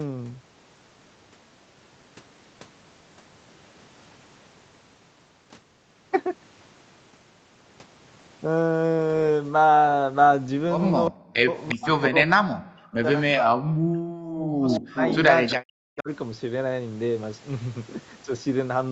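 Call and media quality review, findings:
Speech suppressed in double talk, 11.09–15.0 s and 15.56–16.09 s: voice ducks up to about 40 dB, likely the echo canceller attenuating during crosstalk. Waveform shows gouged gaps, spectrogram dark vertical bands.

Echo leak, 11.63–12.01 s and 14.71–15.55 s: delayed copy 354 ms behind, about 10 dB then 5 dB below speech, likely residual loudspeaker echo. Spectrogram shows shifted duplicate harmonics.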